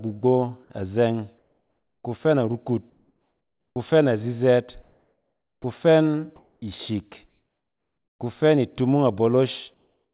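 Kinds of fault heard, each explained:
Comfort noise in place of the background: In the pauses at 1.38–2.04, 2.90–3.76, 4.82–5.64, 6.36–6.62 and 9.74–10.13 s, the faint background gives way to a flat, featureless hiss. It is about 9 to 10 dB quieter in the second and third gaps and close to the surrounding level elsewhere. The likely cause is discontinuous transmission: the sender stops sending during silence, and the receiver fills each gap with synthetic noise shaped roughly like the background.
Onset clipped by the voice detector: At 3.73, 5.61 and 6.59 s the speech comes back with a hard edge, as if switched on. Its first 30 ms are missing, so the soft start of the sound is lost. This likely happens because the sender's voice detector reacts late when speech returns. Those opening milliseconds are never transmitted, and the receiver keeps playing its synthetic noise until the first real frame arrives.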